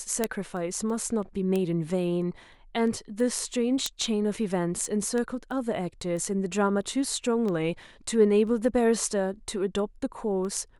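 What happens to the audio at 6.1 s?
At 6.1 s you're in the middle of a run of word clock ticks that lasts from 0.24 s to 10.78 s. Every third of a second or so, a sharp tick lands as the receiver's unlocked clock slips a single sample, which fits the clocks being roughly 70 ppm apart.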